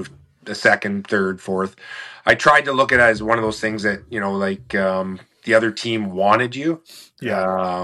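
No technical faults can be heard in this audio.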